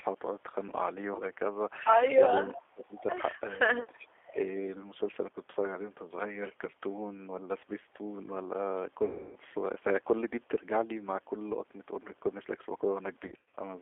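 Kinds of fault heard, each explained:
G.729 codec: The speech runs through a low-bitrate 8 kbit/s coder that rebuilds the voice from a filter, pitch and sparse pulses, so it sounds plainly rough and synthetic throughout. On a spectrogram, energy sits inside roughly 300 Hz to 3.5 kHz, with nothing above.
Speech suppressed in double talk: From 2.4 to 3.02 s the voice sinks by roughly 30 dB in pieces, about half a second in all, likely an echo canceller turning down its own talker along with the loudspeaker echo while they overlap. The waveform shows the envelope collapsing into gaps, and the spectrogram shows faded, patchy bands.
Echo leak: Around 2.95 to 3.03 s a faint, delayed copy of the voice, about 0.43 s late and roughly 25 dB below the speech, slips back through, likely residue a loudspeaker echo canceller failed to remove. It appears as a weak, smeared repeat of earlier spectral patterns.
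VoIP packet loss concealed by the speech codec: At 9.05 to 9.36 s, 290 ms of audio is missing and gets stretched into a fading buzz or coloured noise. At 13.27 to 13.59 s, losses totalling 200 ms are scattered over 300 ms, the longest run 70 ms. Spectrograms show frozen, smeared harmonics decaying smoothly.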